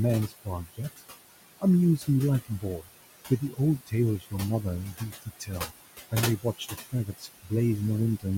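Throughout the clip the background room noise, sitting about 11 dB below the speech, pumps down in the pauses and swells back under each phrase. These are noise suppressor artifacts: the processor pulls what it judges to be steady noise down by about 18 dB frame by frame, so the floor keeps shifting with the speech.

Parts of the speech itself get swallowed: between 0.28 and 1.01 s, 2.45 and 2.85 s, 3.3 and 4.33 s, 4.94 and 5.71 s, and 6.11 and 7.51 s, soft sounds and word endings drop out or go faint, by about 16 to 19 dB at worst. This is speech cut by the noise suppressor, which mistook quieter speech for noise and turned it down with the background, a fraction of a second each time, closer to half a second in the last two stretches.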